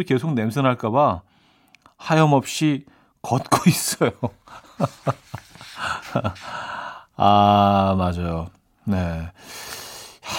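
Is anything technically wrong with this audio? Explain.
No, nothing technically wrong stood out on listening to this speech recording.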